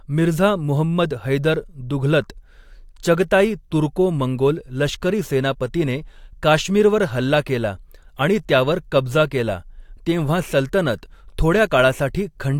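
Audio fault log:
Nothing stood out on listening to this speech recording.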